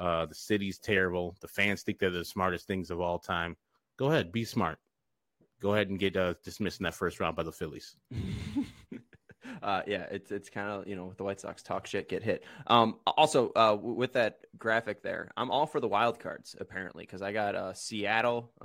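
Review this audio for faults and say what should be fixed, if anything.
Nothing in the speech needs fixing, since no technical fault can be heard anywhere in the signal.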